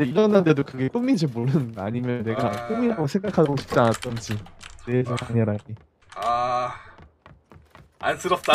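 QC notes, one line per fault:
No faults detected.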